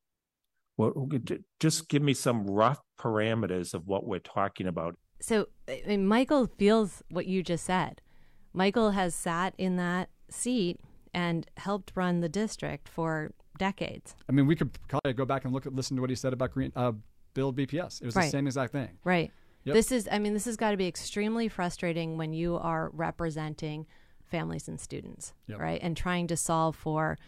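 A digital wireless dropout at 14.99 s, between "I mean we could" and "go back and look", mutes the speech for 60 ms. The receiver lost too much data and muted cleanly, leaving a silent gap with no noise burst.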